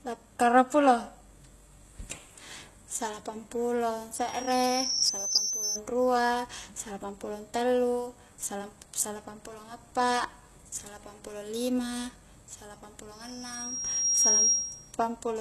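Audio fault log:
throughout: HE-AAC compression. Gritty, metallic treble with nothing above 12.3 kHz. This is likely replicated high bands rebuilt from a low-bitrate core, which fits roughly 16 kbps.
4.16–5.81 s and 13.13–14.93 s: loudspeaker feedback squeal. A 5.7 kHz tone swells over about a second, the first time between "salapang pulo" and "rua salapang". It reaches roughly 10 dB above the signal the first time and roughly 5 dB the second, as loop gain exceeds one.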